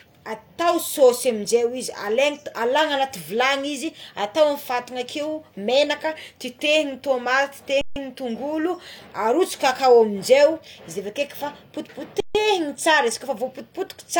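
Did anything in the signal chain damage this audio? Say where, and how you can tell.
Yes. The speech briefly freezes twice, from 7.81 to 7.96 s and from 12.20 to 12.35 s, each pause lasting about 150 ms. The sound stops almost without a click and then carries on where it left off, with nothing missing and only a soft edge on resumption. This is an underrun with held sample at the driver or buffer stage: the output buffer ran dry and the converter held its last value, flattening the waveform until data arrived.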